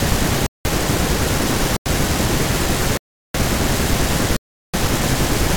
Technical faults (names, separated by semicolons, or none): block of digital silence